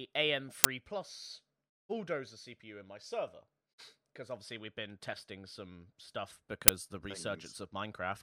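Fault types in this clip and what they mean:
Uninitialised buffer: at 0.64 s and again at 6.68 s, just after "been testing some stuff", a 10 ms block of stale memory was played out before real speech was written into it, producing a loud crack.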